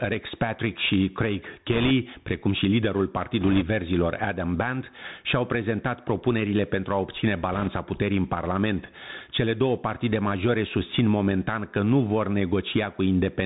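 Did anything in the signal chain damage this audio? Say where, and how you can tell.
Yes. At the input stage, the gain was likely set far too high and a fast limiter or compressor reins it in. Throughout the speech, the gain ducks by about 15 dB under each loud syllable, flattening the dynamics into a squashed, pumping sound.

At the codec stage, the whole clip went through the Bluetooth CVSD headset codec, consistent with a 64 kbps link. Its one-bit delta coding with an adaptive step removes everything above 4 kHz, leaves a granular hiss under the speech, and makes loud high sounds and s sounds distort and scratch.

On the wireless link, bit errors on a Bluetooth voice link show up as short bursts of rushing crackle from 1.73 to 1.91 s, just before "precum și liderul"; from 3.41 to 3.63 s, just after it; and from 7.52 to 7.68 s, between "propunerile pentru a obține" and "puterii în". Because CVSD gives every bit the same small weight, an error rate of a few percent produces noise rather than loud clicks.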